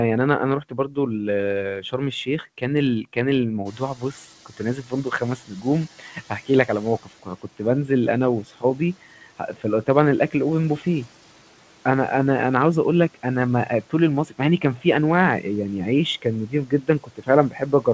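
Speech cut by the noise suppressor appears at 0.63–0.97 s and 1.81–3.17 s, where the suppressor mistakes quiet parts of the speech for noise and pulls them down by about 11 and 10 dB. Soft consonants and word endings sound swallowed. On the waveform the envelope dips abruptly, and the spectrogram shows faint high-frequency consonant energy thinned out.

Around 3.5 s the room noise jumps by about 20 dB. The noise suppressor is catching up from 3.65 to 7.02 s: its noise estimate lags, so the noise comes through with less reduction at first, then sinks by about 9 dB over 3.37 s. A spectrogram shows the noise floor brightening suddenly, then fading gradually.

Speech cuts continue at 3.72–7.6 s (about 12 dB, the deepest), 13.9–14.85 s and from 16.22 s to the end (both about 11 dB), with faint, clipped-looking syllable tails. Everything sits below 8 kHz, consistent with a wideband call codec.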